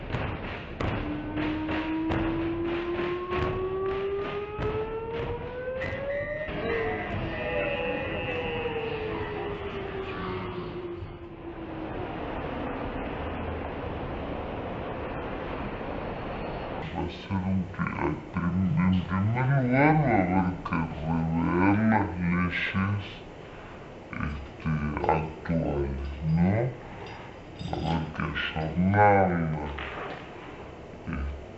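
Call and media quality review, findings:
Stereo read as mono, throughout: half speed, one octave low. Interleaved L/R samples consumed as one channel; spectrogram shows a faint mirrored copy in the upper half.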